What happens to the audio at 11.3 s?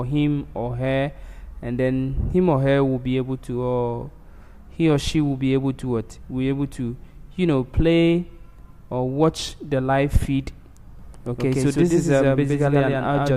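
At 11.3 s the sound is inside a doubled audio track that begins abruptly at 10.99 s and runs to the end of the clip. A second full-band copy trails the original by around a tenth of a second at roughly the same level, giving a hard, slapback-like echo with no decay or room colour. The likely cause is the same signal being captured again through a slower path and mixed back in.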